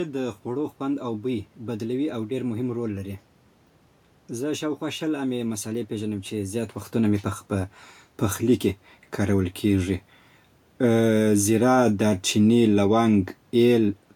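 No technical fault can be heard in the signal; the room noise belongs to the recording space, and the level shifts around 6.5 s and again near 13.5 s come from the talker moving relative to the microphone.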